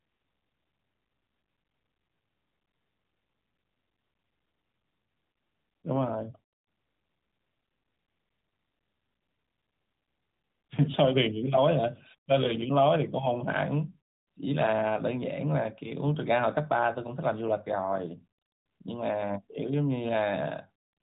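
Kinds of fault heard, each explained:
Lost AMR speech frames: around 12.44 s, a brief dip or warble, fitting one lost 20 ms frame the decoder filled by repeating its pitch settings.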